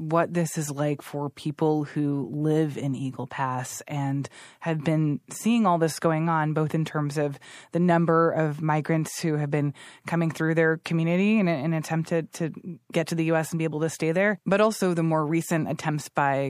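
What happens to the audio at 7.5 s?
At 7.5 s, as throughout, the speech carries MP3 compression. The encoder is short of bits, likely near 64 kbps. It dulls the treble and drops weak detail, leaving a watery swirl.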